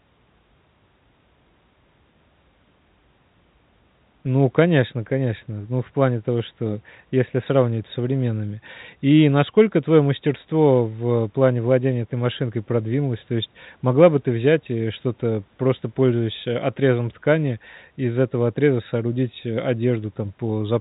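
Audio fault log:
Nothing here counts as a fault: the speech just has the usual narrow telephone sound of G.711 coding, with nothing coming through above 3.8 kHz, and that's simply how the format is meant to sound.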